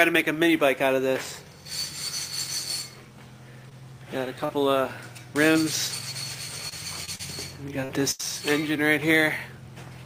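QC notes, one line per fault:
3.69 to 5.57 s, scattered short gaps: a handful of packets went missing here, about three small holes, the longest around 40 ms, each patched by stretching the previous sound. You'll catch brief ticks or little smears, but it stays mostly clear.
6.69 to 8.25 s, repeated packet loss (robotic sound): six gaps land close together, about 220 ms lost in total, the longest 80 ms. Each is filled by continuing the last sound, roughly 14% of the stretch, so it turns choppy.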